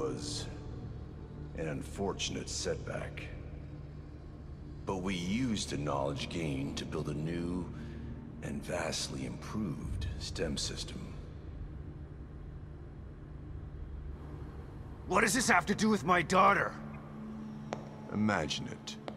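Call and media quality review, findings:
Corrupt frame decoded at 16.92 s: brief faint glitch, low level at about -55 dBFS. Decoder played damaged compressed data, spreading energy across wrong frequencies for a couple of frames. Spectrogram: thin vertical smear. Waveform: barely visible spike.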